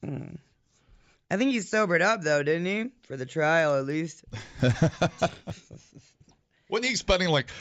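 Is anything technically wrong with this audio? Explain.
Yes. From 3.5 to 5.6 s the speech carries a steady ticking at 10 per second, heard only while sound is present. This is a resampler restarted on every block: each 100 ms block was converted from 16 kHz to 48 kHz separately, leaving an error at every edge.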